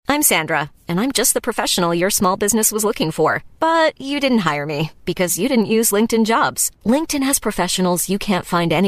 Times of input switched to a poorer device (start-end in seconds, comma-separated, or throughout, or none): none